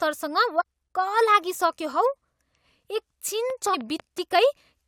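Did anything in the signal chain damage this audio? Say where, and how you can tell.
Yes. At the codec stage, there is damaged data in the compressed stream from 0.60 to 0.62 s. A brief glitch cuts across the speech. Corrupted bytes made the decoder misread those frames and lose sync until it found the next valid frame header.

A train of clicks runs from 3.50 to 4.19 s. About seven near-identical pulses arrive at a regular 5.2 per second, peaking about 5 dB above the speech. They likely come from electrical interference in the analogue wiring or a faulty connection or power supply.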